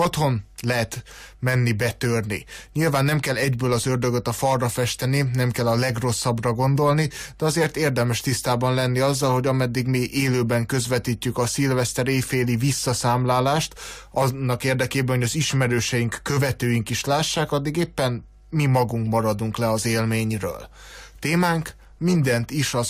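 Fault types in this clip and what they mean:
No fault types are present in this clip.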